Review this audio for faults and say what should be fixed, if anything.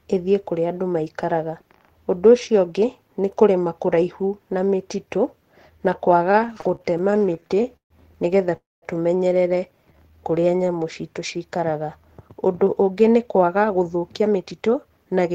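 From 6.31 to 7.93 s there are repeated stalls (stutter): twenty short gaps, the longest 139 ms, where late packets emptied the jitter buffer and the last sound was stretched, just before "nĩgetha tũmenyerere".

At 8.56–8.85 s comes a call audio freeze: about 260 ms of held, fading sound that sinks to 200 ms of silence, likely packets stuck in transit draining the buffer.

A jitter buffer slow-down runs from 9.77 to 10.83 s, between "nĩgetha tũmenyerere" and "citũ cikaraga". Repeated pitch periods add 137 ms, so the audio plays at 88% speed with the pitch unchanged.

From 12.63 s to the end there's a jitter buffer speed-up. Trimmed pitch periods drop about 300 ms, so the audio runs at 110% and sounds hurried.

To prevent all of this, steady the network path and give the jitter buffer a bit more headroom so it drains and refills less sharply.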